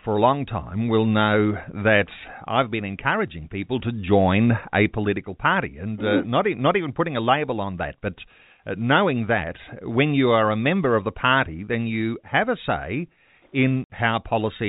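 Packet loss filled with silence hits this speech recording at 13.84 s: the receiver played silence for about 60 ms in place of missing packets, which fits six 10 ms packets. The result is a sudden hole with hard edges, heard over narrowband G.711 telephone coding that cuts everything above 4 kHz.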